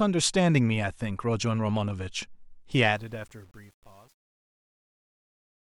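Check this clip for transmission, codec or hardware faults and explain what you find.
One fault is present: truncation distortion on a fade, in the speech fade-out that begins around 2.7 s. From 2.72 s to the end, the gain stage applying the fade drops low-order bits without dither. The effect is consistent with an output of roughly 9 bits. As the level falls, the waveform collapses into coarse square steps. From 3.06 s to 5.71 s, the tail of the fade turns gritty instead of fading cleanly to nothing.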